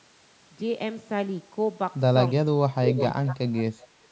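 Speech suppressed in double talk at 2.44–2.53 s and 2.73–2.90 s: the speech drops by about 30 dB in short pieces, likely because the echo canceller, unable to tell the talker from the far-end echo while both spoke, turned everything down.

Echo leak at 2.91–3.05 s: a copy of the speech arrives 365 ms late at about 5 dB below the voice, likely residual loudspeaker echo that the canceller failed to remove and sent back.

Speech suppressed in double talk again at 3.14–3.53 s: the speech dips by about 25 dB for roughly 400 ms, likely the same suppression during overlapping talk.

Echo leak at 3.56–3.61 s and 3.79–3.87 s: faint scraps of the 365 ms delayed copy remain, about 25 and 30 dB down, likely leftover echo slipping past the canceller. The call's microphone processing shows as a band limit, with nothing above 8 kHz.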